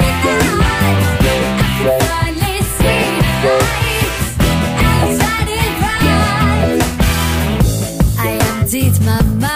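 Nothing stood out as a technical problem on listening.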